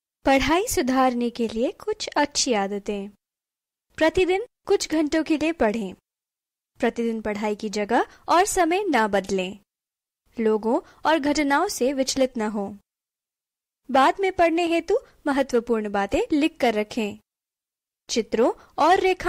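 No faults detected across the clip.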